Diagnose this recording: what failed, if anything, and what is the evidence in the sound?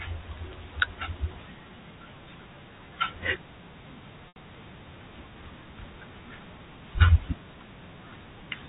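A held, buzzy tone at 4.28 s fades toward silence before the speech cross-fades back at 4.36 s. This is network packet loss with pitch repetition: 80 ms went missing, which fits four 20 ms packets, and the receiver looped the last pitch period, fading it out.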